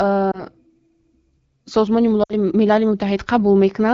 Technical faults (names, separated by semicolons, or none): lost AMR speech frames